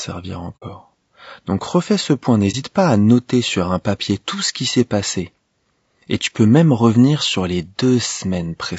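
Throughout the speech, the voice has a rough, grainy texture, with a noise floor filling the gaps between the harmonics and a top band that sounds thinned and synthetic. This is most likely low-delay AAC compression of the kind used in video calls, and the degree of damage fits a bitrate around 32 kbps. Its short frames resolve the pitch harmonics poorly. On a spectrogram the harmonic stripes look smeared, with speckled energy between them and a patchy, less detailed region high up.

At about 0.56 to 0.63 s the sound fades out, drops to silence for roughly 70 ms and fades back in. This is AAC frame loss with muting, and its length fits about two lost frames. The decoder zeroed the missing spectrum, and the overlapping windows taper the edges. The waveform shows a smoothly tapered hole, and the spectrogram shows a clean vertical blank band across all frequencies.

At about 2.51 to 2.55 s, just after "refais ce point" and before "pas à noter sur", a shorter muted gap of roughly 40 ms appears, consistent with a single lost frame. 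It is the same soft-edged dropout, heard as a brief hollow catch. On the waveform and spectrogram it appears as a narrower gap with soft edges.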